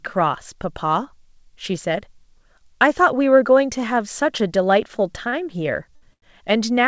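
Three short stalls from late packets fall at 5.29 to 5.34 s, 5.96 to 6.03 s and 6.13 to 6.24 s, holding the speech for 33, 54 and 88 ms. Each time the jitter buffer ran dry and the last sound was stretched until data arrived, so it lingers with a faint buzz or dip. A spectrogram shows flat, smeared harmonics; the waveform shows a repeated, slightly sagging cycle.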